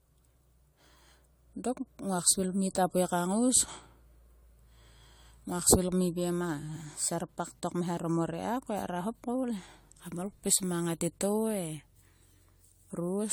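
Generation loss runs throughout this speech: swirly, hollow, smeared sound with blurred attacks, likely from about seven AAC re-encodes, each pass piling fresh quantisation errors onto the last.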